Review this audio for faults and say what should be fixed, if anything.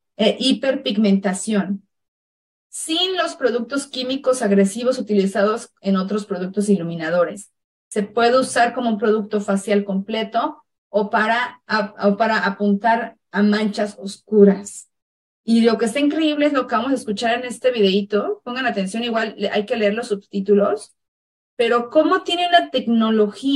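Channel delay (comb filtering) runs throughout: one channel arrives roughly 10 ms late, so the mono sum cancels at evenly spaced frequencies from around 50 Hz upward, leaving a hollow, phasey tone. Unlike room reverb, there is no decaying tail, only fixed notches. Time-aligning the channels before summing to mono would prevent it.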